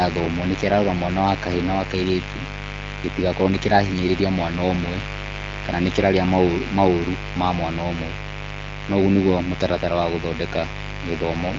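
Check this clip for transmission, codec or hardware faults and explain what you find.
One hardware fault runs through the whole recording: mains buzz. A steady, raspy buzz sits under the speech from start to finish. It is fairly loud, about 10 dB below the speech itself. Its base is 50 Hz. A dimmer, a rectifier or a missing shield lets in sharp switching spikes twice per mains cycle. Those spikes carry harmonics of 50 Hz up into the kilohertz range. The result is a rasp rather than a pure hum. The speech passes through an AMR wideband (HD Voice) codec with only light damage, which fits a rate around 12.65 kbit/s.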